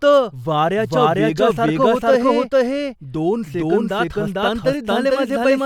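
A speech recording carries a doubled audio track from start to finish: a second, full-band copy of the same speech runs about half a second behind the first and at roughly the same loudness. Unlike room echo or reverb, it is a single repeat with no decaying tail and no change in tone or room colour. Two equally clear versions overlap out of step, most likely from the signal being captured again through a slower path.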